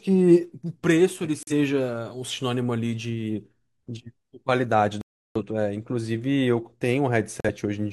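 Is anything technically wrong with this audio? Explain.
Yes, there are corrupt frame muted faults. Flipped bits in the compressed stream made the decoder reject whole frames, and the player inserted silence instead, so the speech drops abruptly to nothing at 1.42–1.53 s, 5.01–5.41 s and 7.40–7.50 s. The gaps, roughly two, eight and one frame long, keep timing intact.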